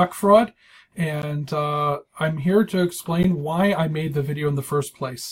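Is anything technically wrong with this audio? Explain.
Yes. Short holes interrupt the sound at 1.22 s and 3.23 s, each 13 ms long and 2.0 s apart. This is a gap between chunks. The audio was handled in 2-second pieces, and silence sits at each join, either from codec padding or from a player starting each piece late. Nothing is lost, only interrupted.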